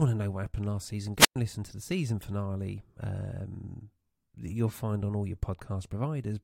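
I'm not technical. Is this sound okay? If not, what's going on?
No. A wireless microphone squelch dropout occurs from 1.16 to 1.36 s. The radio signal from the microphone briefly weakened, so the receiver muted itself to block the static, leaving about 0.11 s of near silence before the speech returned.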